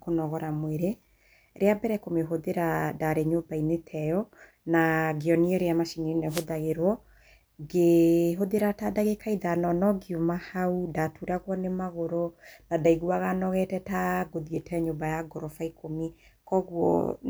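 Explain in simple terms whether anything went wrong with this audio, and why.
A short burst of static, like a swish, cuts across the speech from 6.28 to 6.46 s, right after "ngĩonio ũrĩa macini ĩno". This is a wireless microphone noise hit: the microphone's radio signal briefly faded, so receiver hiss rose up.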